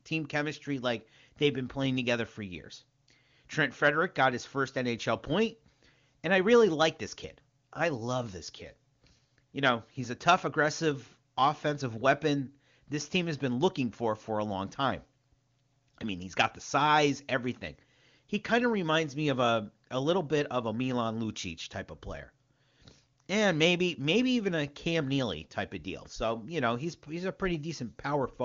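The speech comes through the AMR wideband (HD Voice) codec at its top rate of 23.85 kbit/s, so the audio stays clear with any coding damage faint at most, and the band stops at about 7.2 kHz as that codec's wideband limit requires.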